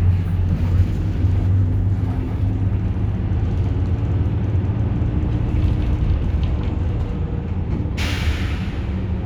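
Nothing goes wrong anywhere in these everyday sounds; there's simply no technical fault to point to.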